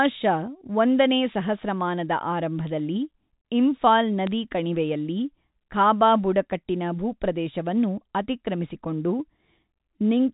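Bit errors on the digital phone line flip a few bits in the coded samples at 4.27 s, just before "ಕಣಿವೆಯಲ್ಲಿ ಖಾಬಾ ಬುಡಕಟ್ಟಿನ ಭೂಪ್ರದೇಶವನ್ನು", hitting 2 frames briefly over the G.711 telephone speech.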